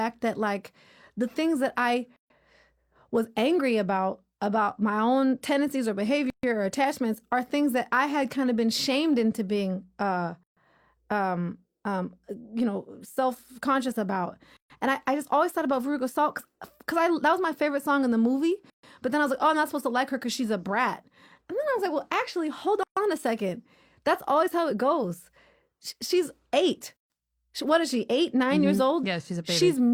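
Every four seconds or so the speech drops into a silence of about 133 ms, starting at 2.16, 6.30, 10.43, 14.57, 18.70, 22.83 and 26.97 s. That's a gap at a join of encoded pieces: each separately encoded chunk kept its start-up delay and end padding, so holes with smeared edges open before the sound resumes.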